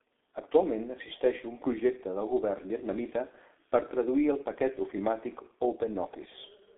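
Speech passed through the G.723.1 codec for its whole length, and the damage is heavy. Nothing reaches above about 3.8 kHz, and the line band sits around 250 Hz to 3.6 kHz, so the sound is muffled and thin. A plain telephone band-limit would stop there, but here the voice is also hoarse and consonants smear, because the codec refreshes its voice model only once per 30 ms frame at a very low rate, which fits roughly 6.3 kbit/s.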